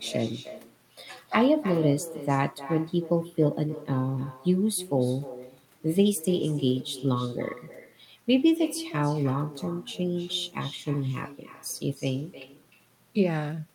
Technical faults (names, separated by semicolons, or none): echo with no canceller